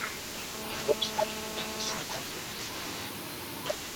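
From 0.54 s to 1.98 s there is GSM phone buzz. A nearby 2G handset on a call bursts at 217 Hz, and the audio circuitry rectifies those bursts into a steady, raspy buzz about 6 dB below the speech. A spectrogram shows stacked harmonic lines 217 Hz apart, and the waveform shows regular pulse spikes.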